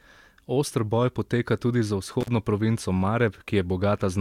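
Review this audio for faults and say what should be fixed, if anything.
There's an intermittent contact fault at 2.21 to 2.28 s, right after "boj poteka tudi za". The line drops out for about 38 ms with crackle at both edges, as a loose plug or cable briefly loses connection and leaves only faint hiss. Reseat and secure the cables and connectors, and swap out any worn lead, before recording again.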